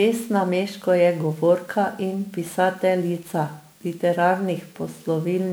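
Speech throughout, with generation loss: a swirly, hollow, smeared texture and softened consonant attacks, likely from around fifteen successive MP3 re-encodes. A single 128 kbit/s encode would not smear this much; the compounding across shifting frame grids is what sets it apart.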